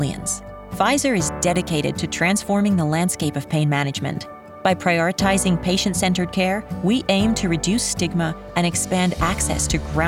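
No technical faults can be heard anywhere in the audio.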